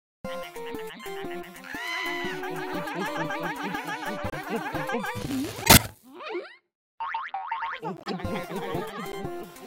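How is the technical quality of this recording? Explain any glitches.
The recording has four short corrupt frame decoded glitches, at 4.25 to 4.34 s, 5.64 to 5.85 s, 7.97 to 8.11 s and 9.12 to 9.15 s. In each one, damaged bits in a compressed frame were decoded anyway, so misread codes or gains put energy at the wrong frequencies for a few frames at a time. The result is a brief chirp, squeak, blip or noise burst. The one at 5.64 s is the longest and strongest, and the one at 9.12 s is the weakest. On a spectrogram, each appears as a blocky, frame-aligned patch of misplaced energy. In the waveform, each shows as a short spike or irregular segment.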